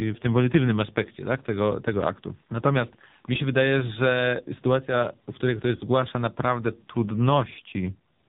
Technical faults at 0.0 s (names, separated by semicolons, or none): AMR narrowband mobile codec